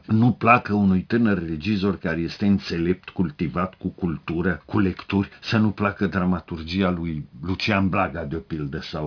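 Aliasing runs through the whole clip. The sound was resampled without low-pass filtering, which fits a drop to about 11 kHz, so content above 5.5 kHz folds back as gritty, metallic tones, roughly 25 dB below the signal. A spectrogram shows energy packed hard against the 5.5 kHz edge, with mirrored stray partials beneath it.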